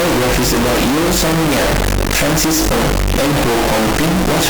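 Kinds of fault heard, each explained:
Integer read as float: the 32-bit integer speech samples seem to be decoded as 32-bit floats, so the output jumps between zero and clipping, giving a harsh, extremely loud square-wave buzz.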